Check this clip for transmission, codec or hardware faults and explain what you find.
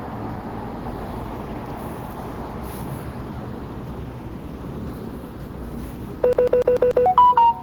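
One fault turns up, near the end of the clip: a CD stuck on one turn. From 6.33 s to 7.06 s the sound catches on a fragment of about 146 ms and plays it five times in a row, each pass cut off by a tiny mute before it restarts. The result is a quick, perfectly even stutter. A scratch is sending the laser back one track at the same point on each rotation, so playback keeps landing on that same slice until it breaks free.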